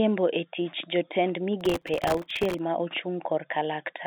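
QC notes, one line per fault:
1.61 to 2.59 s, processor overload crackle: right after "e tich jotend", a gritty tearing rides on the speech for about a second, then stops as the load eases. The processor repeatedly misses its deadlines for very short buffers, each well under a millisecond. Each miss replays a scrap of old audio with hard edges, and dozens of these in a row merge into crackle over the narrow telephone-band G.711 sound.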